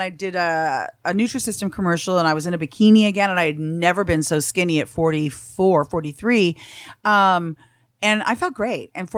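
No technical faults can be heard anywhere in this recording.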